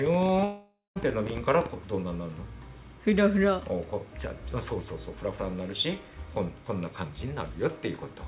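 From 0.06 s to 1.67 s a train of clicks ticks over the sound, about 14 per second at an uneven pace, roughly twenty in all and peaking about 10 dB above the signal. It is likely interference or a faulty connection. Unlike random crackle, the clicks share one shape and persist through quiet moments.

Between 0.44 s and 0.98 s a long network dropout takes out about 520 ms of audio. The receiver stretches the last sound into a fading buzz, with about 180 ms of near-silence, before audio resumes with that stretch missing, likely from lost packets. Unlike a brief gap, the concealment audibly decays before resuming. Throughout, nothing reaches above 4 kHz, consistent with the narrowband call codec.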